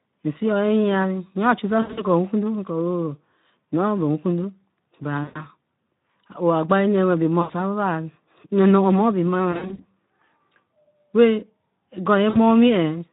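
Speech runs through the Speex codec at about 11 kbps for the whole clip. The damage is plainly audible: the voice sounds hoarse and noisy because the CELP coder has too few bits for the excitation signal. Unlike the swirly, watery smearing of a transform codec such as MP3, this is a grainy, buzzy roughness tied to the voice itself. VoIP packet loss concealed by the speech codec breaks in at 1.81–2.02 s, 5.23–5.44 s, 7.41–7.51 s, 9.51–9.86 s and 12.29–12.38 s. In each case the decoder carries the last pitch and filter forward and lowers the gain, so instead of silence the sound stretches into a fading buzz or tinted noise. About 140 ms is missing around 1.8 s, 120 ms at 5.2 s, 80 ms at 7.4 s, 140 ms spread across 280 ms near 9.5 s, and 60 ms at 12.3 s. That smeared, decaying tone, and the weak voice that lingers briefly after each gap, tell it apart from a plain dropout, which would cut straight to silence.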